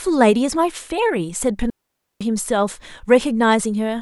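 At 1.70 s the speech drops into a digital wireless dropout lasting about 0.51 s, to 2.21 s. The receiver lost too much of the data stream and muted behind a very short fade, leaving a clean hole of near silence with no noise burst on either side.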